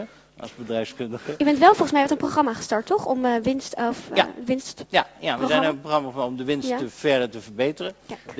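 No faults; the audio has passed through a wideband call path, with nothing above 8 kHz, consistent with a G.722-class codec.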